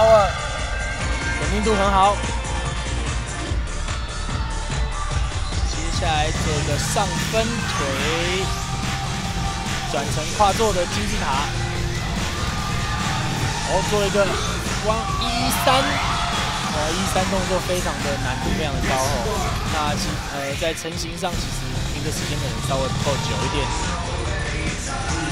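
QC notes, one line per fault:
0.0–1.0 s, channel delay (comb filtering): one channel arrives roughly 1.5 ms late, and when the two are summed to mono the shared content cancels at evenly spaced frequencies, the first near 300 Hz, leaving fixed notches and a hollow, phasey tone.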